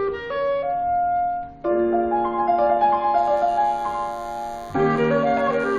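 From 3.17 s to the end, a DECT cordless phone buzz sits well below the main sound: a thin, steady 100 Hz drone from a nearby handset or base station bursting every 10 ms, rectified in the audio circuit. A spectrogram shows evenly spaced harmonic lines stacked upward from 100 Hz; the waveform shows a regular 10 ms pulse train.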